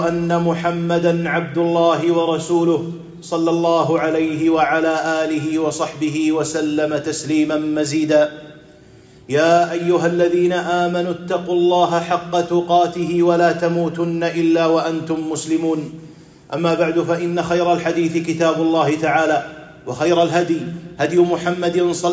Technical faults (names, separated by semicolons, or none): none